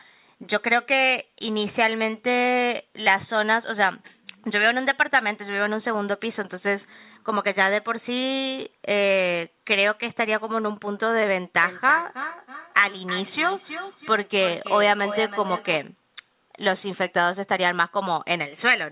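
From 11.63 s to 15.86 s the speech comes back on itself at a steady interval of roughly a third of a second, each repeat thinner and more ringing, the loudest about 10 dB below the speech. That is feedback echo between two devices: a second device in the room plays out this microphone's audio and the microphone picks it up again, while the echo canceller removes only its own device's playback. Everything sits below 4 kHz, which fits a G.711 call path at 64 kbps.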